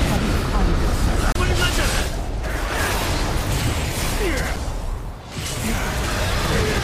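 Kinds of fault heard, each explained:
Damaged data in a compressed stream: corrupted bytes in the encoded file make the decoder misread frames and lose sync until it finds the next valid frame header. This clip has two brief glitches, at about 1.32 to 1.36 s and 4.54 to 4.58 s, each roughly 40 ms long. On a spectrogram each shows as a narrow vertical break in the surrounding pattern. On the waveform each appears as a short disruption in the envelope.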